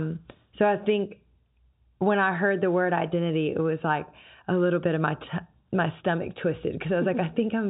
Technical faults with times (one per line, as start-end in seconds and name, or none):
none